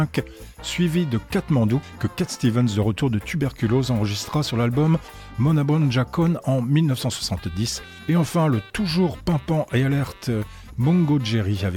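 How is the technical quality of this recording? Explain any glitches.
No glitches can be heard anywhere in the recording, and the signal holds steady without any technical disturbance.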